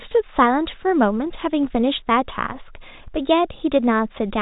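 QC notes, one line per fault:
No faults are heard in this speech recording. It carries the usual traits of G.711 telephone coding, with nothing above 4 kHz and a faint quantisation hiss that follows the signal level.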